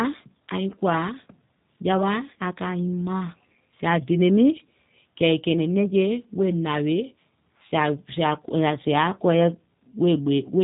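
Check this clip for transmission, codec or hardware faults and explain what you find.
One codec fault runs through the whole speech clip. G.729 codec damage is plainly audible from start to end. Each 10 ms frame is rebuilt from a vocal tract filter, a pitch predictor and a few pulses, at a rate that fits 8 kbit/s. Nothing above 3.8 kHz survives. The speech sounds thin, rough and slightly synthetic.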